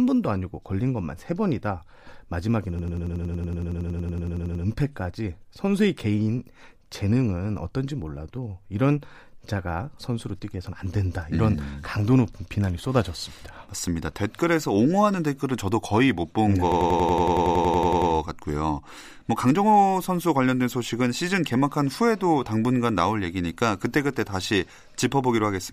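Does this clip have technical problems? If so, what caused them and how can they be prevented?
Yes. There's a system hang loop twice, from 2.79 to 4.64 s and again from 16.72 to 18.11 s. The computer or driver stalled while the audio hardware kept replaying the same stretch of its ring buffer, so one slice of about 93 ms repeats exactly, which fits a 4096-sample buffer. At 10.8 repeats per second it comes across as a machine-gun stutter, not a buzz. Keeping the audio thread at high priority with up-to-date drivers, and steering clear of heavy background load while recording, should stop these freezes.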